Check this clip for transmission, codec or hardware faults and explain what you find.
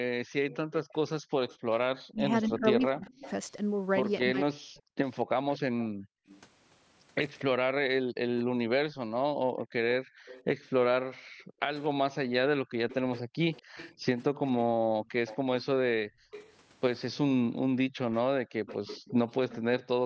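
Three echo-canceller faults appear in this speech recording, all tied to a loudspeaker on one side of a call.

Echo leak, from 0.5 to 8.43 s, 10.27 to 16.53 s and 18.15 to 19.84 s: the loudspeaker side's echo canceller likely failed to remove everything its microphone picked up from the loudspeaker, so a copy of the speech returns 238 ms late. It sits about 20 dB below the speech in the first stretch and about 15 dB below in the later two.

Background gated by the echo canceller, at 1.57 to 1.69 s and repeatedly between 5.85 and 18.6 s: while the loudspeaker played, the canceller clamped the microphone down. The room sound drops by about 25 dB for roughly a tenth of a second at first, then by up to about 40 dB across about four seconds in total.

Speech suppressed in double talk, between 2.11 and 4.71 s: with both sides talking at once, the canceller likely could not tell the local talker from the echo and turned both down. 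For roughly a second in total the voice dips steeply, in places by around 40 dB. The call's microphone path, which passes nothing above 8 kHz, does not hide any of this.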